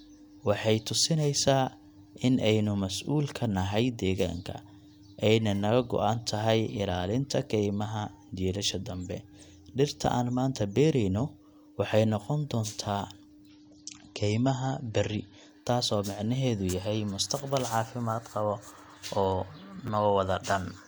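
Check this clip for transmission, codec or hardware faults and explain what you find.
Two kinds of fault turn up in this speech clip: chunks out of order in two places, and one stretch where an adaptive stream dropped to a lower bitrate.

At 8.71 to 8.73 s and again at 19.87 to 19.89 s, there is a brief jumbled flicker. These are chunks out of order. A 10 ms chunk arrived one chunk late and played after its successor, so nothing is missing but the sequence is scrambled, leaving three hard joins.

From 13.49 to 15.49 s, the speech suddenly loses its brightness and codec artefacts rise, with nothing above 8.4 kHz. Quality then snaps back without any gap. This is an adaptive stream at a lower bitrate. The connection slowed and the player switched to a leaner version, which fits a change from MP3 at 128 kbit/s to 32 kbit/s.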